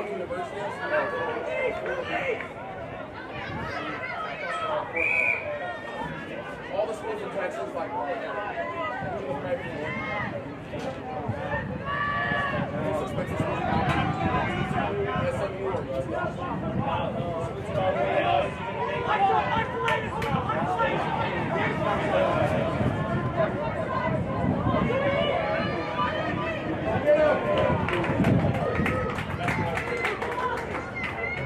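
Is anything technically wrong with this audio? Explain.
Yes. From 21.17 s to 28.29 s the audio has a doubled audio track: a second, full-band copy of the same sound trails the original by roughly 400 ms at around 10 dB lower, likely from a second, slower capture path or an edit that left two copies out of step. It sounds like a dry, distinct echo with no room tail, starting and stopping abruptly. On a spectrogram, every event reappears as a fainter duplicate shifted about 0.4 s later.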